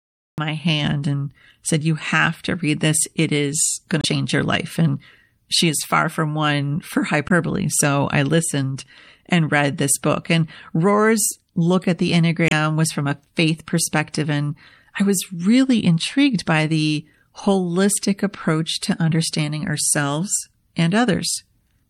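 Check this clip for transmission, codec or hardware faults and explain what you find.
Three kinds of fault are present in this speech clip: lossy compression running throughout, a cut-off start, and three bursts of damaged compressed data.

MP3 compression, most likely at a low bitrate, affects the whole clip. The encoding appears to have been starved for bits, which fits something around 64 kbps. It dropped the upper treble above a fixed cut-off and discarded weak frequency detail that flickers between frames. The damage is plainly audible: the speech sounds watery and swirly, sibilants turn metallic and chirpy, and consonant onsets smear instead of landing crisply.

The cut-off start comes from a recording or stream that began late. The file opens on digital silence, and the sound appears abruptly at 0.38 s, mid-utterance, just before "my hand and said". There is no natural attack or fade-in, so the speech lurches in already under way rather than starting cleanly.

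Damaged data in a compressed stream occurs three times: 3.99 to 4.05 s, between "is going" and "your life"; 7.29 to 7.31 s; and 12.47 to 12.53 s, between "look at the" and "was from a faith". At each point some of the encoded bytes were lost or corrupted, so the decoder misread frames, lost sync and hunted for the next valid header. Each event is heard as a brief squawk or blip.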